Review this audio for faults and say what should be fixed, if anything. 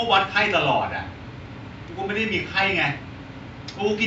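Nothing to fix: no faults are audible in the speech, and the room noise sits about 50 dB below it as part of the recording.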